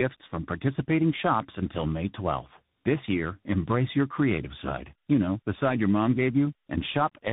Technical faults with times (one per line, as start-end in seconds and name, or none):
0.00-7.32 tandem speech coding